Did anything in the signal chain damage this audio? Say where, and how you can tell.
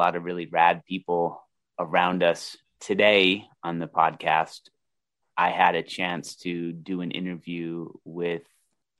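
No, I hear no damage anywhere in this chain.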